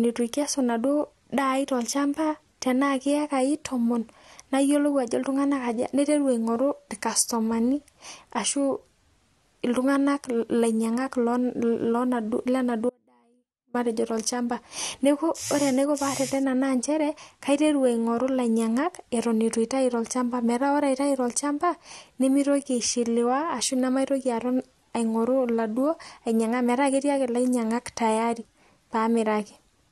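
An audio dropout to a faint residue runs from 12.90 to 13.74 s, cutting the speech abruptly for about 0.85 s. Only a faint leak of sound, roughly 35 dB below normal, remains. The likely cause is the wanted signal being lost while the downstream path stayed live.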